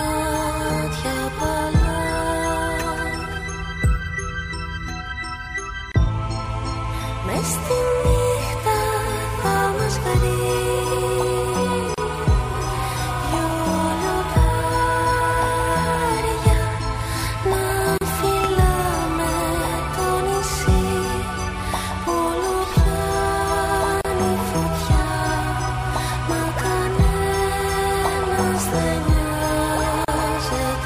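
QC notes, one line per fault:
5.92, 11.94, 17.98, 24.01 and 30.05 s: gap at a join of encoded pieces. The sound drops out briefly at each point, then resumes where it left off. The first gap lasts about 27 ms, the rest about 34 ms each. They fall every 6.0 s, which points to 6-second pieces encoded separately and joined untrimmed. Each piece keeps its encoder's start-up silence and padded final frame. The edges are smeared by the codec.
18.44–18.47 s: loud pop. A single sharp pop sits on top of the sound, roughly 15 dB above it. It lasts under 30 ms, shaped by the circuits after it. The sound continues unbroken underneath. This is likely a sudden voltage pulse, such as a plug, switch, static discharge or driver glitch. It comes less than half a second after the join at 17.98 s but is a separate event.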